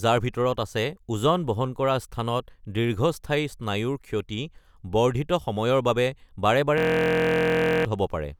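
At 6.78 s the speech locks into a system hang loop until 7.85 s. The machine stalled while the hardware kept replaying one 23 ms slice, which fits a 1024-sample buffer, so you hear a steady 43 Hz buzz, and about a second of real audio goes missing.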